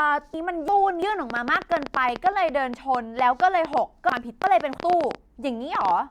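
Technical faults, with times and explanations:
0.34–1.02 s and 4.10–4.78 s, chunks out of order: in each span, a block of audio about 0.34 s long was delivered or written one block late, so it plays after the block that should have followed it. The two blocks swap places. Nothing is missing, but the speech runs in the wrong sequence, and there are three abrupt joins at each swap, so both moments sound jumbled and choppy.
1.30–5.92 s, train of clicks: around forty similar sharp pulses land on the audio at an average of about 8.9 per second, spaced unevenly. The likely source is electrical interference or a faulty connection or power supply, injecting impulses into the signal path. They peak at about 10 dB above the speech, so the ticking and popping stands out clearly and carries on through the pauses.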